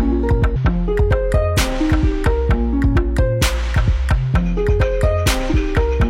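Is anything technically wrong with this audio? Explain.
Yes, there are two short glitches from damaged data in a compressed stream, at 0.51 to 0.57 s and again at 5.48 to 5.54 s, each lasting about 50 ms. In both spots, some of the encoded bytes were corrupt, so the decoder misread those frames, lost its place in the stream, and had to hunt for the next valid frame header before playback settled. You hear each one as a quick glitch cutting into the sound.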